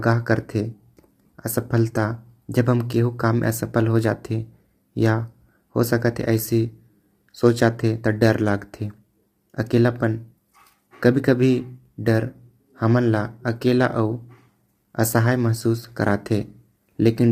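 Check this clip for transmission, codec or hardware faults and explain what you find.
Low-delay AAC compression runs throughout the speech, likely from an AAC-ELD encoder at a rate that fits roughly 32 kbps. Its short frames resolve pitch harmonics poorly, so the voice comes through plainly rough and grainy, with noise filling the gaps between harmonics.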